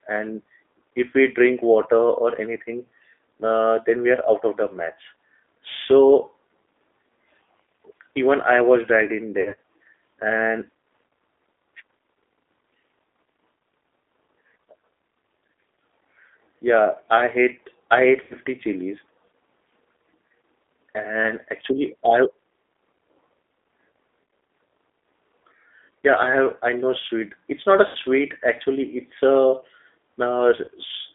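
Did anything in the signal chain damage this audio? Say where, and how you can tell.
Yes. At the codec stage, the whole clip shows G.729 codec damage at 8 kbit/s, plainly audible. The audio is confined to a telephone band of roughly 300 Hz to 3.6 kHz, with nothing above. The speech has a rough, slightly synthetic texture. That texture comes from rebuilding each 10 ms frame from a vocal-tract filter, a pitch predictor and a few pulses rather than from the original waveform.

At the network stage, there are five short dropouts where VoIP packet loss was concealed by the speech codec. The first comes just after "i was dragged in", at 9.41 to 9.57 s, where 100 ms is lost in gaps spread over 160 ms, the longest run being 40 ms. The next follows "i hate i ate" at 18.23 to 18.35 s (80 ms). Another, of 40 ms, falls at 24.24 to 24.28 s. Then comes one after "not a" at 27.87 to 27.97 s (80 ms), and a last 40 ms one at 30.64 to 30.70 s. 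Each gap is filled with a stretched, fading continuation of the preceding sound, a buzzy tone or coloured noise, and the speech stays weak briefly afterwards. That happens because the decoder extrapolates from its last pitch and filter state and must rebuild that state once packets resume.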